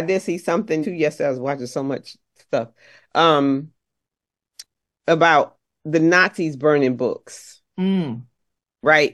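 At 0.82 s, compressed frames are skipped. A few frames of about 46 ms each never play, so the speech jumps ahead roughly 150 ms.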